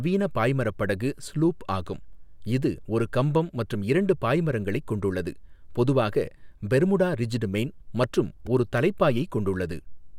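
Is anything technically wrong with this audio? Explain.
Yes, a repeated buffer at 8.47 s, just after "பெர்முடா ரிஜ்டு மெயின் மற்றும்". Late audio made the device replay one tiny slice, which fits a 64-sample buffer, several times, producing a brief buzzy click.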